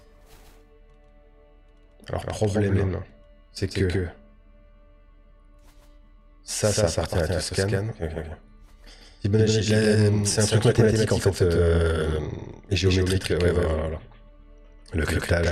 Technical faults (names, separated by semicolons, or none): doubled audio track